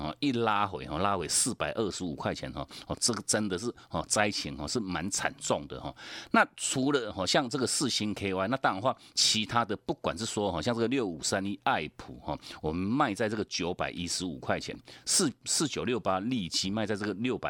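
No technical faults can be heard in this recording.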